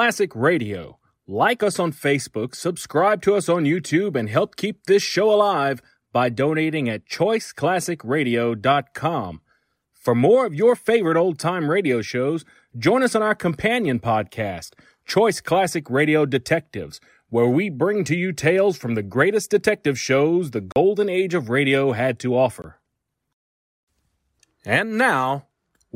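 A speech clip with two blocks of digital silence: a 40 ms hole at 20.72 s between "greatest detective shows the" and "age of radio had", and a 20 ms one at 22.62 s after "of radio had to". Each is a hard cut to silence and back, which points to output buffers not being filled in time.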